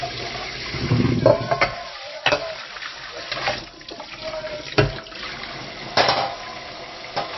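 Throughout, the encoder likely ran short of bits under MP3 compression, which fits a bitrate near 25 kbps. It cut everything above 5.8 kHz and switched weak frequency lines on and off between frames, leaving the sound dull, watery and swirling, with smeared attacks.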